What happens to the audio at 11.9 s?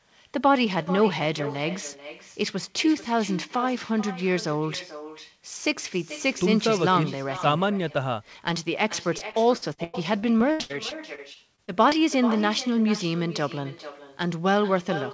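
Repeated packet loss (robotic sound) runs from 9.18 s and ends at 11.93 s, so 11.9 s is the last moment of that choppy stretch. Audio packets kept going missing or arriving late, and each hole was patched by stretching the last bit of sound before the next hole arrived. About a fifth of the span is concealed this way, with gaps of up to 97 ms, giving a choppy quality with pieces of speech missing.

Echo with no canceller is present here as well, as it is across the whole clip. The far end plays the call through a loudspeaker, its microphone picks that sound back up, and nothing removes it. Every phrase returns roughly 0.4 s later at about 14 dB below the speech, as a thinner shadow trailing the talker, held within the G.722 path's 8 kHz bandwidth.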